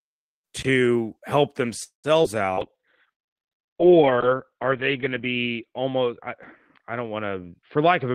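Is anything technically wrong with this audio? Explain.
Yes, there are four kinds of fault, and the later ones overlap with the earlier ones.

From 1.83 to 2.07 s there is a call audio freeze. The sound stops moving forward, trails off as a fading continuation of the last sound, and sits in silence for about 130 ms. When it resumes, it picks up exactly where it left off, so roughly 200 ms of gap has been added and nothing is lost. This points to packets that were likely delayed in transit, leaving the jitter buffer empty. It differs from packet loss because no audio is skipped, only postponed.

Short concealed packet loss follows at 2.24 to 2.27 s and at 2.53 to 2.60 s. Each time, about 40 ms of audio never reached the decoder and was replaced by a continuation of the preceding sound. At 2.53 s the patch is about 40 ms long and sounds like a brief smear or wobble. At 2.24 s only a few milliseconds are patched, so the audio jumps ahead and takes back about 40 ms of the delay the freeze added. 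Unlike the freeze, real audio is missing here rather than held back.

From 2.62 s to the end there is a call bitrate drop. The bandwidth estimate fell and the encoder switched to much coarser coding. The sound fits a fall from about 32 kbps to about 6 kbps. The top end is cut from about 20 kHz to about 4 kHz, so the audio becomes muffled and rough, and it is at its worst for about 1.6 s. This fault changes the tone for a long stretch. It does not cause brief dropouts.

From 7.52 to 8.10 s there is a jitter buffer speed-up. The buffer was holding more audio than its target, so the receiver cut short pitch-period pieces, around 70 ms in total, to reduce the delay. The audio runs at about 112% of normal speed with the pitch unchanged, so it sounds hurried. This sets it apart from the bitrate drop, which affects tone but not timing.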